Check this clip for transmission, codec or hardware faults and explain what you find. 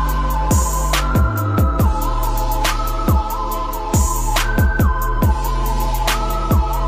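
Nothing in the clip points to a transmission, codec or hardware fault. The sound continues steadily with no interruptions, distortion or other disturbances to report.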